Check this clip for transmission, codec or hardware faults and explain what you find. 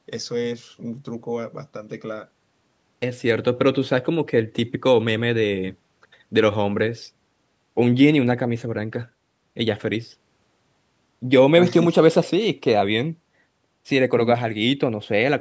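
No transmission, codec or hardware faults are present in this speech; it has passed through a call's microphone processing, whose trimmed low bass and absence of content above 8 kHz are normal for that path.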